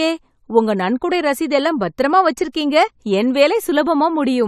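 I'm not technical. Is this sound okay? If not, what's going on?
No. At 2.52 s, right after "நன்கொடை ரசீது எல்லாம் பத்திரமா", there's pre-echo: a short hiss for about 19 ms just before a sharp sound begins. Compression spread noise backwards into the quiet gap, so it arrives early and softens the attack, unlike a click, which lands on the sound itself.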